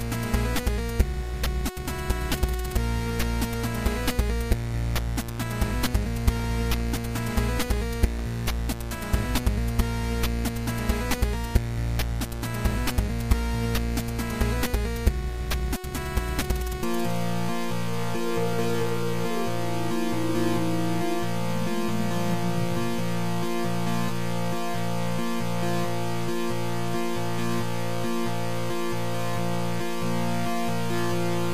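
From about 6.37 to 8.2 s there's a train of clicks: around fifteen sharp, same-shaped ticks at an uneven pace, roughly 8 per second, peaking about 5 dB above the underlying sound. The likely cause is interference from nearby equipment or a faulty connection or power supply.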